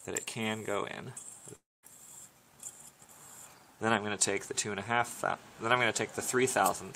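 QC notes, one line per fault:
1.55–1.85 s, long network dropout: sound continues as a fading buzz, then falls silent for about 0.2 s; resumes with roughly 0.28 s missing, likely from lost packets.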